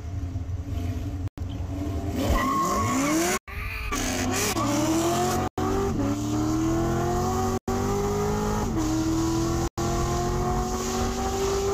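You'll hear a gap between chunks at 1.28, 3.38, 5.48, 7.58 and 9.68 s, 100 ms holes at the joins between 2-second blocks.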